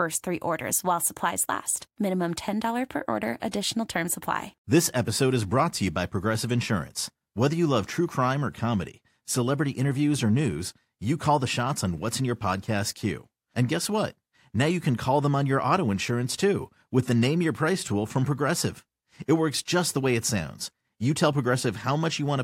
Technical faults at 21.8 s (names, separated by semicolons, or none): none